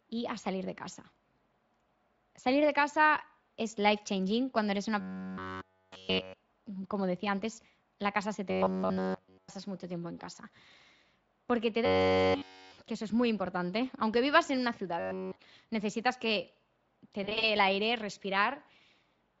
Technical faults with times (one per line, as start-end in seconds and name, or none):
5.00-6.34 robotic sound from repeated short buffers
8.50-9.49 robotic sound from repeated short buffers
11.85-12.76 robotic sound from repeated short buffers
15.00-15.36 robotic sound from repeated short buffers
17.23-17.49 VoIP packet loss concealed by the speech codec